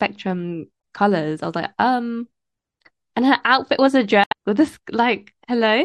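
At 0.78 to 0.83 s and again at 4.24 to 4.33 s, damaged data in the compressed stream makes the decoder misread corrupt frames and lose sync, leaving a brief chirp, squawk, click or short hole in the speech.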